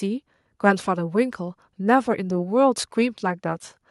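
A short stretch of recorded speech, with nothing in it that points to a technical fault anywhere along the signal path.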